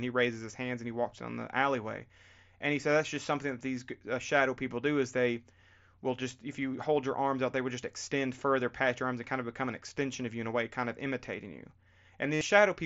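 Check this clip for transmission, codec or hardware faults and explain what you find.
One fault appears near the end: concealed Bluetooth headset packet loss from 12.33 to 12.41 s. The link is carrying wideband mSBC audio, with its light graininess on louder sounds.

For about 75 ms, a run of headset packets failed to arrive, and the receiver repeatedly copied the closest-matching piece of the preceding waveform to fill the gap. This produces a buzzy, pitched drone at full level with a slight warble as real audio resumes. A plain dropout would fall silent instead.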